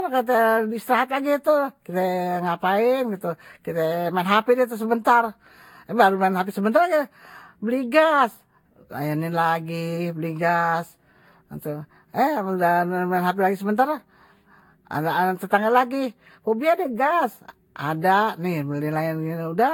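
Across the whole speech recording, the sound is swirly, hollow and smeared, with consonant attacks blurred and nothing above 18.9 kHz. This is generation loss, likely from around half a dozen successive lossy Vorbis passes, each re-quantising on a shifted frame grid so the noise and spectral holes pile up. What separates it from a single low-bitrate encode is that the damage sounds heavier than a rate near 65 kbit/s would produce once.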